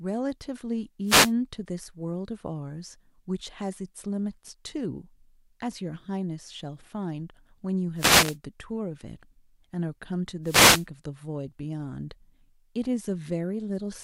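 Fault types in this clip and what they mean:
Wireless microphone noise hit: the FM radio link fades as reflected paths cancel, so receiver noise surges over the speech as brief static bursts at 1.05–1.33, 7.95–8.37 and 10.43–10.86 s; a spectrogram shows broadband vertical noise smears, the waveform a fuzzy thickened band.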